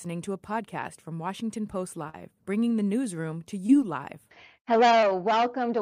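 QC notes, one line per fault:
2.09–2.19 s, 3.66–3.70 s, 5.00–5.04 s, short concealed packet loss: packets missed the decoder, so the receiver extrapolated about 40, 20 and 18 ms of the preceding speech before crossfading back, leaving brief smears or wobbles, with the first gap slightly lengthened.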